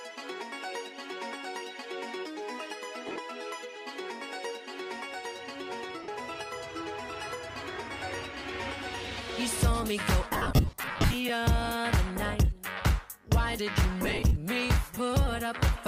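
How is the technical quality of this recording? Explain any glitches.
The recording has audible dropouts from lost LE Audio frames at 3.07–3.18 s, 6.03–6.08 s, 10.33–11.14 s and 14.02–14.36 s. With frames missing, the LC3 decoder repeats the last spectrum with randomised signs, smearing tones into noise. The longest affected stretch, near 10.3 s, loses 69 frames scattered over about 0.8 s.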